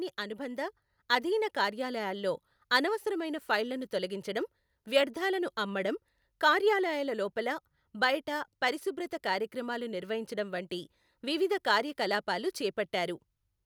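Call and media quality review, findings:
Automatic gain rising, 0.16 to 2.30 s, before "అనవసరమైన ఫైళ్లను తొలగించడం వ్యర్థాలను". AGC judged input too quiet, ramped gain up about 5 dB. Speech and background swell together. Waveform: envelope widens steadily. Spectrogram: all bands brighten uniformly, noise floor included.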